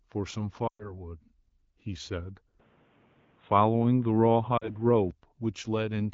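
Lost AMR speech frames at 0.67 to 1.02 s: a burst of radio errors corrupted consecutive frames, so the AMR-WB decoder kept repeating the last good pitch and vocal tract settings while steadily lowering the gain. The speech drops to near silence within two frames. The roughly 120 ms gap fits about six 20 ms frames. When good frames resume, the speech sounds thin and rough for a moment before it settles.

Input switched to a poorer device from 2.60 to 5.11 s: the sound abruptly turns dull and boxy, with nothing above 3.8 kHz, where the wideband path had been carrying clear content up to about 7 kHz. There is no gap at the change. The level shifts by a few decibels, and a faint new background noise appears well below the speech. This most likely means the recording moved to a different microphone or a headset's call profile, which passes a narrower band.

Lost AMR speech frames again at 4.57 to 4.76 s, inside the narrowband stretch: a shorter loss of about 40 ms, consistent with two frames. 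Here the concealment drops the speech to near silence within the two frames, and the voice comes back weak or rough for a moment.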